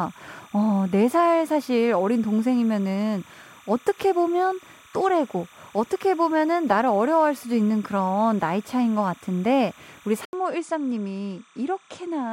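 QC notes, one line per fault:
throughout: timecode bleed, linear timecode at 29.97 frames per second leaking in about 30 dB under the speech as a chirping warble near 1 and 2 kHz.
10.25 to 12.32 s: input switched to a poorer device, likely; an 80 ms gap, then nothing above 10.5 kHz, slightly lower level, faint new background noise.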